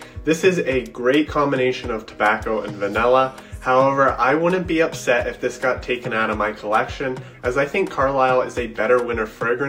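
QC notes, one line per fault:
Nothing stood out on listening.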